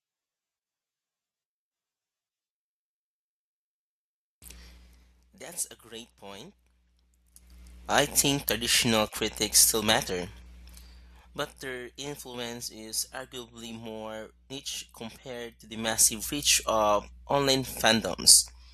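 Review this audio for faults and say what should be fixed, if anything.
Zipper noise at 7.25–7.60 s, 10.67–11.95 s and 15.62–16.21 s. The level moves in unsmoothed steps, about ten per second, and each step clicks, so a ticking rides on the speech.

The first run rises around 20 dB in 5 dB steps, just before "I think traditional critics". The second falls around 10 dB in 1 dB steps after "traditional critics still matter". The third rises around 10 dB in 2 dB steps after "arguably more niche compared".

To prevent it, ramp gain per sample or with a short smoothing filter instead of jumping once per block.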